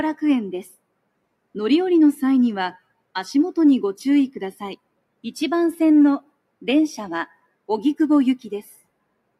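Parts of the sound sink by about 21 to 22 dB in short dips, a few hundred milliseconds at a time, within 0.71–1.56, 2.78–3.14, 4.53–5.25, 6.21–6.64, 7.27–7.69 and 8.66–9.37 s. This is sound cut by the noise suppressor, which mistook it for noise and turned it down.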